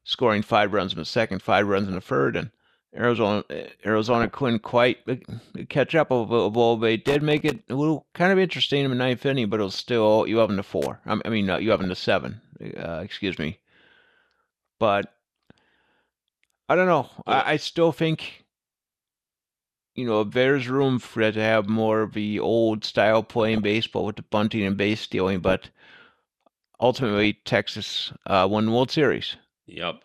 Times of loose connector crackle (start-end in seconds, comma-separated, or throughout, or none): 7.05-7.62, 10.82-10.91